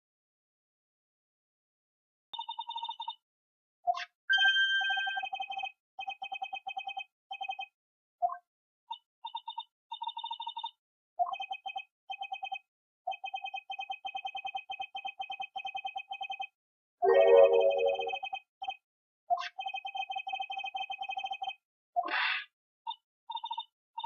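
Audio dropout to silence from the very start to 2.34 s: dead silence with no room tone, likely from a lost input while recording continued, before sound cuts in.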